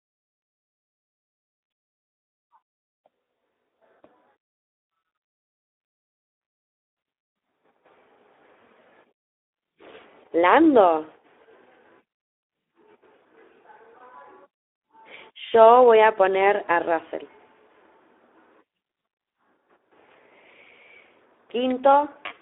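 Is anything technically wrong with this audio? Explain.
Yes. Throughout, the speech carries Speex codec damage: a low-bitrate CELP coder, here consistent with roughly 11 kbps, starves the excitation of bits, so voicing turns plainly hoarse and noisy inside a 300 Hz to 3.5 kHz line band. That grainy rasp, not just the narrow band, separates it from plain telephone filtering.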